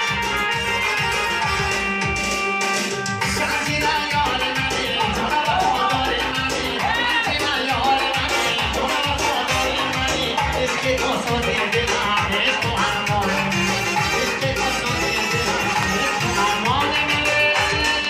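No technical faults can be heard anywhere in the audio.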